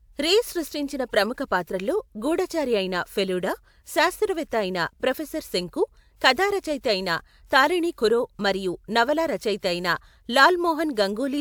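No technical faults can be heard anywhere in the speech recording, and the signal stays continuous and stable throughout.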